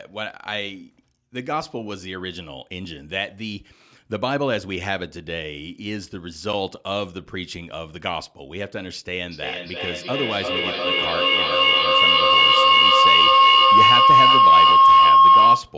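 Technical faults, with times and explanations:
9.31 s to the end: feedback howl. From 9.31 s a tone near 1 kHz rises out of the speech and lasts to the end of the clip, peaking about 14 dB above the speech level. The sound comes back roughly every 300 ms, the time sound takes to travel once around the loop. Two devices on the same call share a room, so a loudspeaker's output reaches another microphone and is sent back out louder on each pass. Each trip narrows the sound toward the frequency the loop favours, leaving a howl that persists until the loop is broken.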